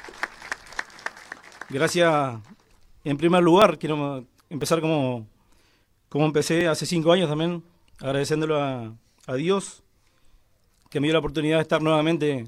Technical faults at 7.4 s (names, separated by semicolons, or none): none